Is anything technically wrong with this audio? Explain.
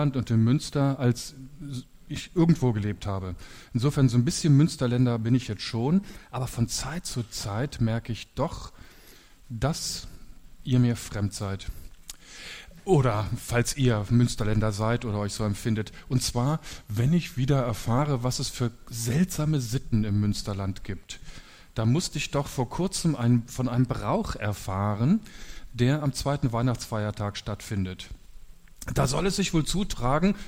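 Yes. At 5.98–6.58 s and 23.76–24.41 s the sound runs 6.2% fast and about a semitone sharp, then snaps back. At 16.33–17.98 s it runs 6.2% slow and about a semitone flat. That's a drift correction step, likely clock-matching software jumping the playback rate to rebalance its buffer.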